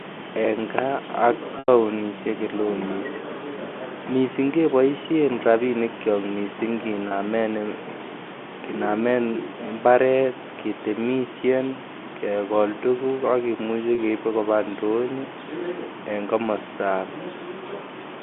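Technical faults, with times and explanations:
1.59–1.68 s, 7.08 s (after "keboisheen rabinik kyook mising") and 13.95 s (after "kegool tuguuk ak kimuche"), packet loss with pitch repetition: the receiver fills the 30 ms gaps by looping the last pitch cycle, giving a brief buzzy hold. The 90 ms gap fades toward silence, then cross-fades back.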